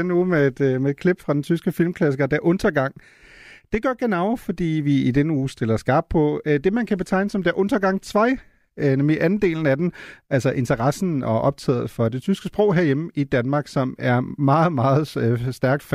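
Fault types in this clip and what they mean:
No technical faults can be heard; the signal stays continuous and stable, with no disruptions to the audio path.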